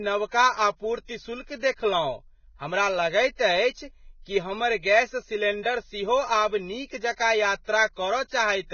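All the way through, the speech has that hissy, grainy texture with nothing above about 6.6 kHz, and the damage is heavy. That's likely Vorbis compression at a very low rate, something around 17 kbps, where the treble gets quantised so coarsely that the fine detail turns into noise.

Right after "गैस सिलेंडर सेहो आब", from 6.86 to 6.90 s, there's pre-echo: a short smear of hiss, about 36 ms long, that arrives just ahead of a sharp onset. The codec spread noise sized for the loud attack back over the quiet moment before it, so the attack comes across soft and blurred.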